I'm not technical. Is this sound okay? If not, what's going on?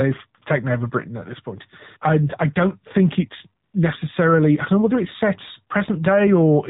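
No. Two problems can be heard.

The whole recording carries damage from the AMR narrowband mobile codec, the compression used for ordinary 2G and 3G phone calls. It keeps nothing above 4 kHz, so the speech sounds boxed-in. Here it is squeezed hard enough that the speech also turns buzzy and robotic. That artificial, rebuilt quality is what separates it from a recording that is simply muffled or played through a small speaker.

From 3.64 to 3.74 s, AMR comfort noise takes over for about a tenth of a second. The phone decided nobody was talking and stopped sending the real sound. The receiving end filled the gap with smooth, even, made-up hiss. Unlike a dropout, the gap is not silent. You hear a flat, steady noise switch in and back out, replacing the real background.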